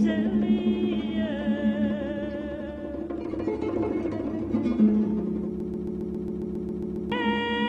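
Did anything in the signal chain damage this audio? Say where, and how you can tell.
Yes. A broken-record loop runs from 5.60 to 7.12 s, where a fragment of about 136 ms repeats exactly, back to back, 11 times, and the sound that belonged there never arrives. This likely comes from a stalled playback or stream buffer replaying its last fragment.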